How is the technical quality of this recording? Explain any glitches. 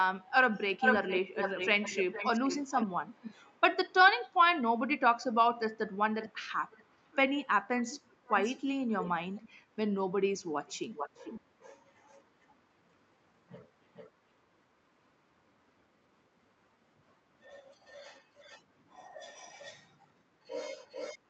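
Quality takes a hit from repeated echo leak, a delayed copy of the speech trailing the original by roughly 0.44 to 0.55 s. It turns up at 0.29–3.92 s (strongest, about 5 dB under the speech), 6.21–7.16, 7.91–9.49, 10.67–12.23, 13.94–14.1, 17.86–18.62, 19.37–20.07 and 20.89–21.19 s, ranging from about 15 to 25 dB down. Likely a far-end loudspeaker feeding the mic, with echo cancellation missing some.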